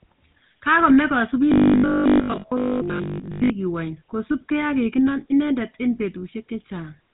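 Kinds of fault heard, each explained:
GSM full-rate codec: The speech has clearly audible damage throughout, with a buzzy, gravelly roughness. The codec rebuilds the voice from a vocal-tract model and a sparse pulse train. Nothing is heard above 3.8 kHz. This fits the 13 kbps full-rate coder.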